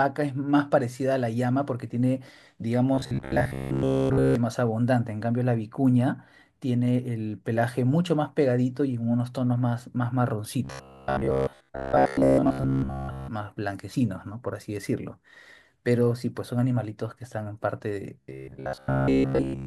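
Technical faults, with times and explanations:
2.95–4.35 s, 10.65–13.28 s and 18.21–19.66 s, robotic sound from repeated short buffers: new audio was likely arriving too slowly, so playback kept looping the last chunk of roughly 15 ms in place of the missing speech. The loops impose a fixed 66.8 Hz buzz, so the speech turns into a stiff, metallic drone that only loosely tracks the talking. The first stretch still carries some real audio between repeats, while the later two are almost entirely repeated material.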